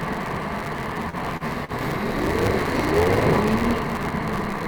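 A recording of everyday sounds carries a block size mismatch (truncated) throughout. One stage writes longer blocks than the next reads, which fits a 256-sample read block, so the tail of each block is discarded. The result is a 172 Hz buzz and sounds running 1.88 times too fast at roughly normal pitch. Three short stalls from a late packet follow at 1.09–1.16 s, 1.37–1.44 s and 1.65–1.72 s, where the jitter buffer ran dry and the last sound was held for 35, 36 and 40 ms, with nothing lost. From 2.66 to 2.87 s, processor overload crackle appears: around ten buffers of about 10 ms each missed their deadlines and were skipped, tearing hard-edged gaps that come through as gritty crackle.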